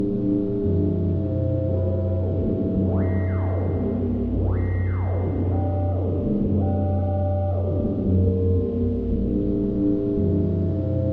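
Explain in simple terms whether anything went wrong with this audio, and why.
Nothing went wrong with these sounds that a listener can hear; the recording holds steady throughout, with no defects anywhere in it.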